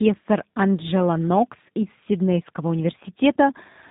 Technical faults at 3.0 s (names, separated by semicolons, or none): tandem speech coding